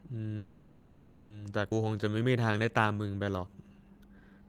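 A speech recording. From 0.37 to 1.32 s the last sound is drawn out into a buzzy, hissing tone that fades but never drops to silence. Then the speech picks up exactly where it left off with nothing lost. This is a call audio freeze, most likely caused by packets stalling in transit and the jitter buffer running dry, so the receiver filled about 930 ms of waiting time. At 1.70 to 1.73 s the audio jumps abruptly forward, and the two sides are joined almost seamlessly. This is a skip ahead: around half a second of speech was discarded while later audio was already queued, leaving only a tiny join rather than a gap. From 1.84 s to 4.46 s the speech runs slow at unchanged pitch, at about 87% speed, with stretched sounds. This is a jitter buffer slow-down: the receiver repeated single pitch periods and slivers of pauses to rebuild its reserve, adding 361 ms in total.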